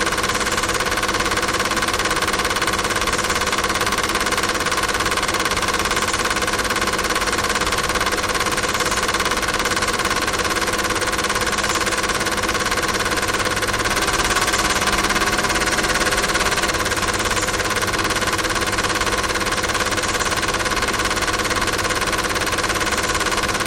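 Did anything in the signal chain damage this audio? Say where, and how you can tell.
Yes. From 13.86 to 16.70 s there's a doubled audio track: a dry, full-band copy trails the original by roughly a fifth of a second, about 5 dB down, with no decay, and cuts in and out abruptly. Likely cause is a second, slower capture path or a misaligned edit.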